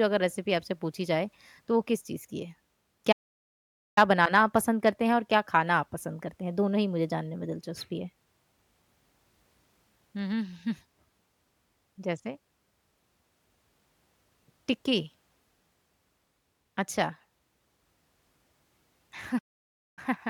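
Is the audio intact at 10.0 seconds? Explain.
Yes, the audio is intact at 10.0 seconds, with no audible fault at that point in the speech.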